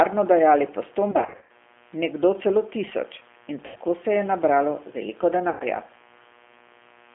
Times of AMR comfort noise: none

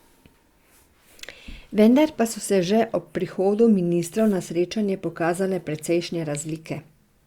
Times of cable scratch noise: none

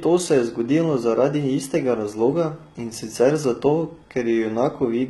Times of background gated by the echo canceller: none

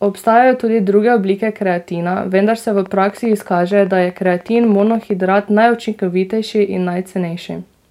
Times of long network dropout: none

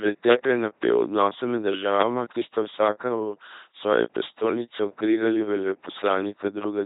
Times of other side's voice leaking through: none

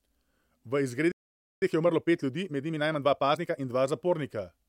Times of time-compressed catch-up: 1.62-3.62

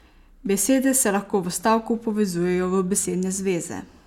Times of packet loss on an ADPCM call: none

